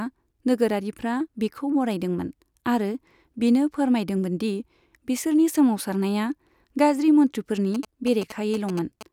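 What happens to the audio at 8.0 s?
Right after "बिसोरनि सोमावसारनाया गाज्रि मन्त्रिफोरनि", GSM signalling bursts run from 7.75 to 9.03 s: a nearby 2G phone's radio pulses get rectified, giving a galloping dit-dit-dit of short 217 Hz buzzes, well below the speech.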